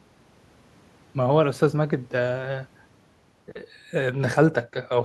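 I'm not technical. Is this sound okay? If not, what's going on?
Yes, nothing in this speech recording points to a technical fault, so there's nothing here that needs fixing.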